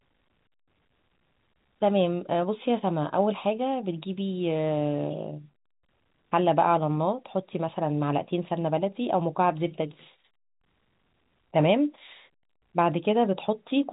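No technical faults can be heard in this speech recording. It carries the narrow band of G.711 telephone coding, with nothing above about 3.8 kHz.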